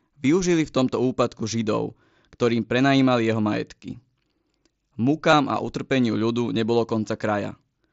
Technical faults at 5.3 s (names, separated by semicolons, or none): concealed Bluetooth headset packet loss